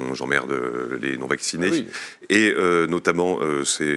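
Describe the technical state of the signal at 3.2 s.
At 3.2 s the speech signal is intact, with only the room's own background noise sitting about 39 dB below the speech.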